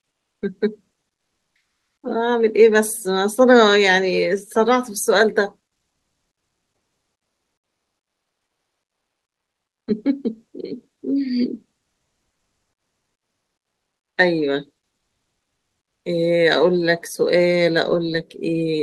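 It's a speech clip, and from 1.15 to 2.03 s, for just under a second, the real background drops out and comfort noise takes its place. You get a flat, featureless hiss, about 25 dB quieter, likely from discontinuous transmission in something like Opus DTX.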